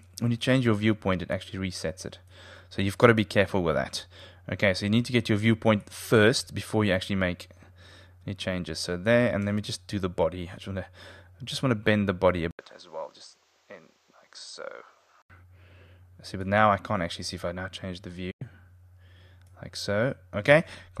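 Input switched to a poorer device, from 12.51 to 15.30 s: after a short 80 ms silence the sound turns duller and about 10 dB quieter, with nothing above 8.3 kHz and a new noise floor well below the signal, likely from recording moving to a narrower-band device.

Digital broadcast dropout at 18.31 to 18.42 s: the receiver muted when incoming frames failed, with an 8 ms fade into a 96 ms hole, which fits roughly four lost frames. The audio sent during that gap is gone.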